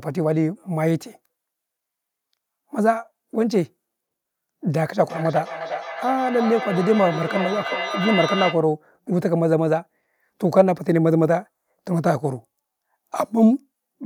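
Feedback echo between two devices runs from 4.97 to 8.69 s. One device plays what the other's microphone sent, that microphone captures it again, and neither echo canceller removes the other's playback, so speech returns roughly every 0.4 s, peaking about 7 dB below the direct speech.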